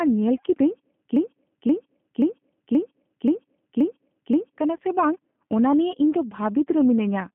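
G.729 codec damage runs through the whole speech clip. The speech has been rebuilt from a vocal-tract filter, a pitch predictor and a few pulses per short frame, rather than carried as a waveform, which gives it a rough, slightly synthetic grain that is plainly audible. The band is held to roughly 150 Hz to 3.5 kHz, so the speech sounds thin and telephone-like, which fits an 8 kbit/s G.729A coder.

A broken-record loop runs from 1.16 s to 4.58 s. A 528 ms fragment repeats exactly, back to back, six times, with the same sound recurring in identical chunks for over three seconds. The cause is likely a stall somewhere in the player, encoder or stream, which kept resending the last piece it held. Whatever should have played during those seconds is gone.

VoIP packet loss concealed by the speech codec follows at 4.77 s to 4.81 s. It is a brief gap of about 44 ms that fits a single lost 20 ms packet. 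The decoder filled the hole by extending its last pitch and filter with falling gain, so the speech briefly smears into a stretched, fading sound. Because each frame builds on the previous one, the speech stays weakened for a short while after normal packets resume.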